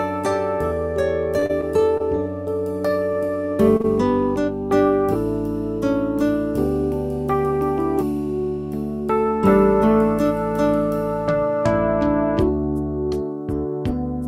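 From 1.39 to 2.02 s there's repeated packet loss with a robotic sound: four short holes, none longer than about 30 ms, each patched by stretching the last bit of audio. That leaves roughly 60 ms genuinely missing and gives a choppy, robotic texture across the stretch.

At 3.77 s a short stall from a late packet kicks in. The jitter buffer ran dry, so the receiver held the last sound for about 27 ms until the packet showed up and then carried on where it left off. Nothing is lost, just a brief held, slightly buzzy moment.

Right after, from 3.82 to 3.86 s, comes a short concealed packet loss. About 20 ms never arrived in time, and the gap got filled by continuing the preceding sound before blending back. It comes across as a quick smear or wobble tacked onto the stall.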